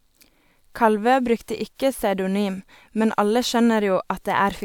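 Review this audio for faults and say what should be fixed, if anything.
Nothing stood out on listening, so there is nothing here that needs fixing.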